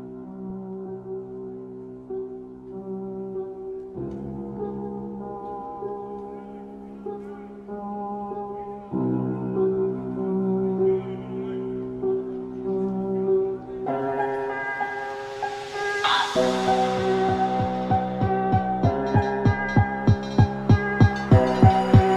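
Audio read two samples at a time (double speed) begins at 13.86 s and lasts to the end. Each pair of samples is taken as one frame, so the sound runs twice as fast and an octave higher.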